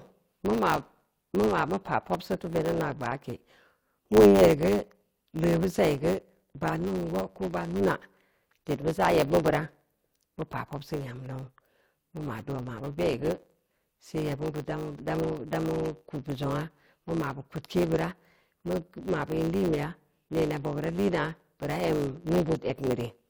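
Speech, affected throughout by a block size mismatch (truncated). One stage appears to hand over blocks longer than the next stage accepts, consistent with 512-sample blocks being written, so each block loses its tail. Those regular cuts produce a steady buzz at 100 Hz, the block rate, and because material is discarded every block, the talking runs about 1.07 times fast while its timbre stays.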